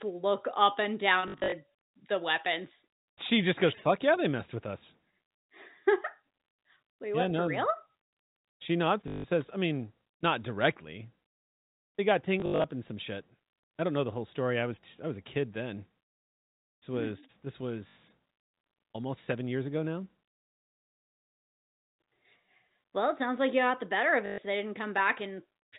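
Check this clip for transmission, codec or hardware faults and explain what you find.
Five bursts of packet loss with last packet repeated, heard over the G.711 telephone band, which cuts off at 4 kHz: 1.28–1.52 s (after "look up and"), 9.08–9.24 s (before "says I mean not"), 12.40–12.64 s, 17.88–17.96 s and 24.26–24.38 s (after "got the better of"). Each gap is filled by replaying the previous packet, so the repeats break pitch continuity at the joins. Runs buzz at 50 Hz, which fits 20 ms packets, and sound like a brief robotic stutter. The waveform shows identical blocks with step discontinuities. The spectrogram shows copied slices and vertical click lines.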